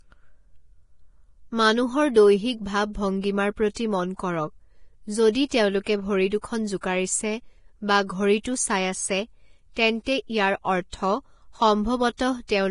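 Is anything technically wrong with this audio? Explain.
Yes. Throughout, the speech sounds hissy and grainy, with nothing above 10.5 kHz. This is heavy Vorbis compression, likely near 30 kbps, where coarse treble quantisation turns detail into noise.

Pre-echo occurs at 3.74 s, 5.33 to 5.35 s just before "তেওঁলোকে ভৰি দুখন", 6.81 to 6.83 s just after "তেওঁলোকে ভৰি দুখন", 8.43 s, and 12.17 to 12.19 s. Block-spread quantisation noise puts a roughly 20 ms hiss ahead of each attack, softening it.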